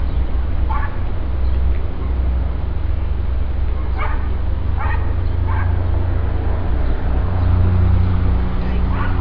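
Nothing to flag in this recording of sounds; there's no technical problem to point to anywhere in it.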